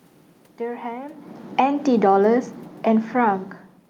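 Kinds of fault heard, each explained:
automatic gain falling: The automatic gain control judged the input too loud, or its background noise too strong, and pulled its gain down gradually, taking the level down by about 4 dB between 1.43 and 3.6 s. The speech sinks steadily across those two seconds, and the room noise beneath it drops by the same amount. That shared drop marks it as a gain change rather than the talker moving, which also happens around 1 s and again near 3.5 s.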